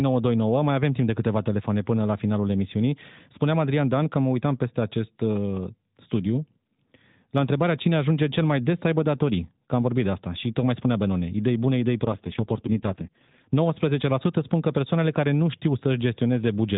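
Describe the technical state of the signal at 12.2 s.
At 12.2 s the signal is inside an AMR rate drop running from 12.04 to 13.48 s. The narrowband codec falls back to a lower mode, consistent with a drop from 12.2 to 4.75 kbps, so the speech turns buzzier and more synthetic, with unchanged bandwidth and no gap.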